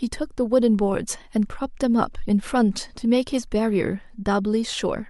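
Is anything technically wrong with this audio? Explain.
No, nothing technically wrong can be heard here.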